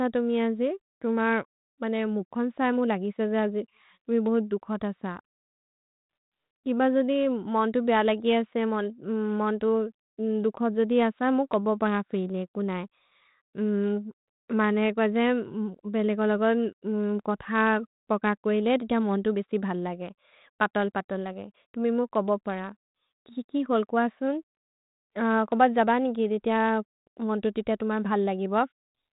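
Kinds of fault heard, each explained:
Nothing in the speech stood out as a fault on listening.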